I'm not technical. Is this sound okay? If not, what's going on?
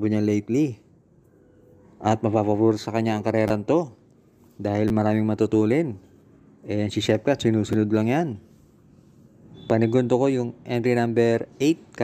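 No. There are three repeated buffer faults, at 3.48–3.50 s, 4.88–4.90 s and 7.73 s. Fresh audio arrived late, so the player replayed a tiny slice, which fits a 10 ms buffer, two or three times in a row. Each one comes across as a short click or buzz.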